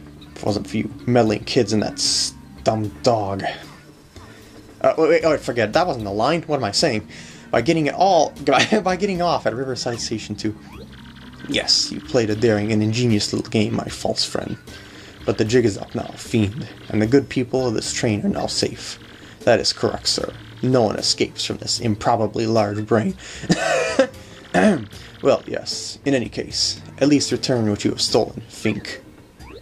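Nothing stood out on listening; no technical fault could be heard anywhere in the audio.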